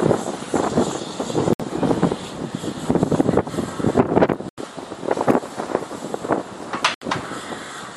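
At 1.53 s the sound drops to silence for about 64 ms, then again at 4.49 s for 87 ms and at 6.94 s for 72 ms. Each gap is most likely a Bluetooth stall: radio interference delayed packets, the headphone buffer emptied, and playback halted until retransmissions arrived. On a waveform each shows as a flat line with abrupt edges; a spectrogram shows a clean vertical blank band across all frequencies.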